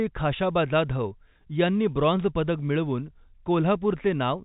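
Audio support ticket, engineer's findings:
No faults found in the speech; the band stops at about 3.8 kHz, as expected for G.711 telephone coding.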